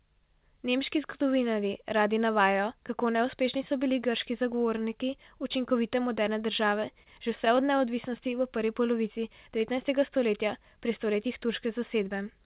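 From 6.7 to 7.82 s, between "grški zagovorniki učinkovite moderne" and "v prvi polovici devetnajstega", the speech shows repeated stalls (stutter). Packets arrived late, so the jitter buffer ran dry nine times, and each time the receiver stretched the last sound, at most about 30 ms, 118 ms in all, about 11% of that stretch. Unlike packet loss, nothing drops out; the speech simply drags and hiccups before continuing, all within audio cut off above 4 kHz by the narrowband call codec.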